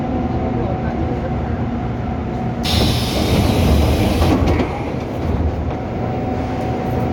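No technical faults can be heard anywhere in this recording.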